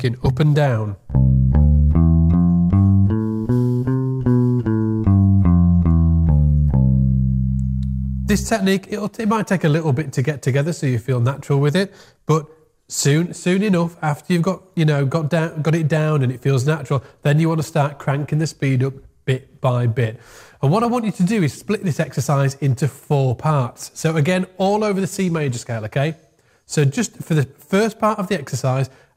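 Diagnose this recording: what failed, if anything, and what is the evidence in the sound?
Nothing here seems to have failed: listening all the way along, there's no point in the recording where any stage of the chain gives itself away.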